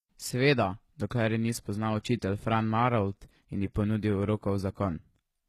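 It's a speech clip with plainly audible damage all the way through, likely from HE-AAC compression at a bitrate of about 20 kbps. The treble sounds rebuilt rather than real, with gritty, lispy s sounds and nothing above about 19.2 kHz.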